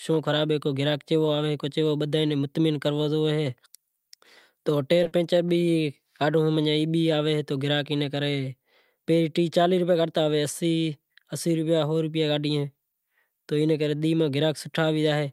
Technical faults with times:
5.03-5.07 short stall from a late packet
5.07-5.13 short concealed packet loss

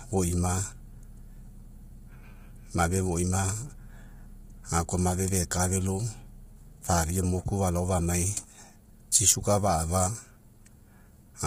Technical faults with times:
0.00-11.46 low-delay AAC compression

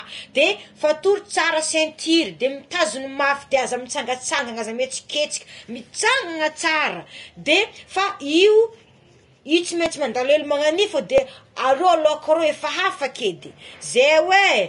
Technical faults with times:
0.00-14.69 low-bitrate audio saved at a high bitrate
4.39 dropped buffer (overrun)
9.86 dropped buffer (overrun)
11.18 dropped buffer (overrun)

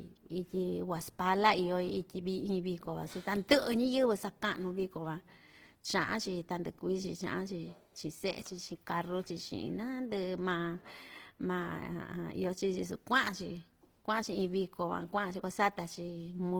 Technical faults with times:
0.00-16.59 Opus compression

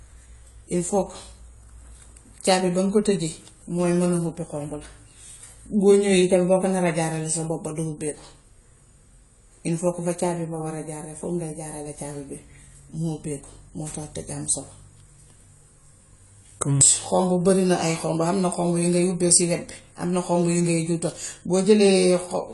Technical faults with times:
0.00-22.54 AAC compression

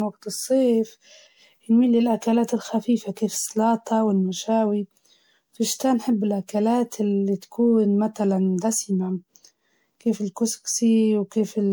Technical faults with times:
0.00-11.72 generation loss

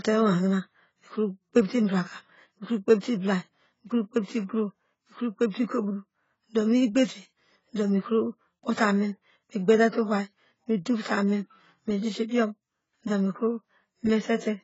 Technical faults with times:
0.00-14.64 AAC compression
3.00-3.03 pre-echo
11.02-11.05 pre-echo

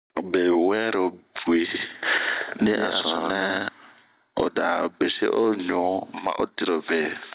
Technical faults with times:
0.00-7.34 gain pumping
1.74-3.68 doubled audio track

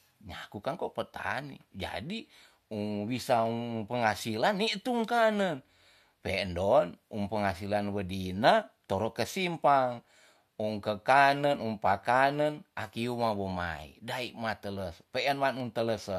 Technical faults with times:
3.46-15.60 clock drift buffer slips

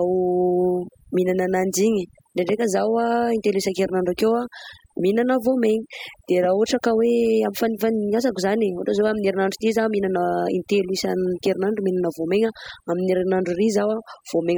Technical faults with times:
0.00-14.57 overdone noise removal

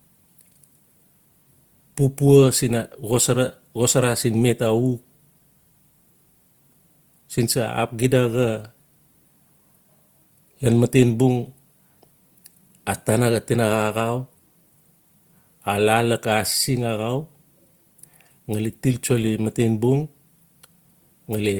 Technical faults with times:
0.00-21.59 Opus compression

